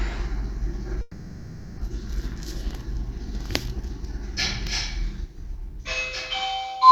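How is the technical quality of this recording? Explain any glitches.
The recording has one glitch, between 1.01 and 1.79 s. A long network dropout likely starved the receiver of audio for about 0.78 s, so it filled the gap itself by continuing the last sound it had. That comes out as a buzzy or hissy, smeared extension that fades. When the audio resumes at 1.79 s, the stretch of the sound that went missing is simply gone.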